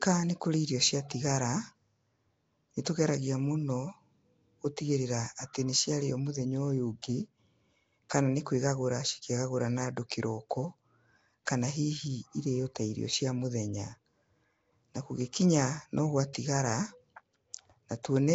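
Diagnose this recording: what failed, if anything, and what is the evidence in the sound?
The codec stage failed. Throughout the speech there is a rough, hissy halo and a smeared, underwater quality, with nothing above 7.8 kHz. This is most likely Nellymoser compression, which fits the Flash-era Nellymoser Asao codec at a low bitrate of about 32 kbps. Bands too weak to earn bits are replaced with noise, which explains the fizz. Plain bandwidth limiting would sound dull but clean, and a telephone band would cut off far lower, nearer 3.4 kHz.

Pre-echo, also from the codec, appears at 7.02 s and 16.33 s. Each sharp onset is preceded by about 15 ms of hiss and lands softened rather than crisp. The block transform spread quantisation noise, sized for the loud attack, across the whole block, including the quiet moment just before it. A click or dropout would sit on or after the event, but this noise leads it and is locked to the attack.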